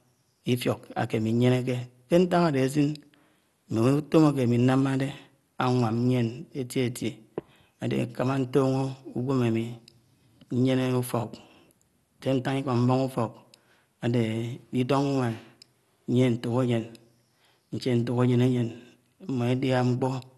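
Throughout the speech the sound is dull and carries a gurgling, granular roughness, with nothing above about 12.2 kHz. This is likely MP2 compression at a rate that fits 64 kbps, where upper sub-bands drop out and the remaining ones are coarsely quantised.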